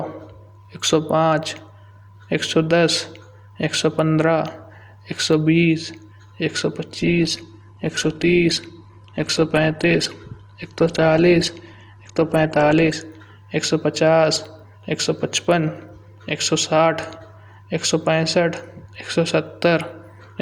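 At 6.97 s the speech abruptly loses quality, and it recovers just as abruptly at 12.96 s: an adaptive stream at a lower bitrate. For those six seconds the connection evidently slowed and the player switched to a cheaper encoding, which sounds like a drop from around 64 kbit/s Opus to around 16 kbit/s. Nothing above 12.5 kHz survives and coding artefacts thicken, yet playback never stops.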